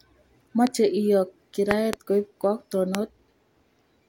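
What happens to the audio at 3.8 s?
Nothing goes wrong at 3.8 s; the speech carries on intact through that moment with no dropout, click or other fault.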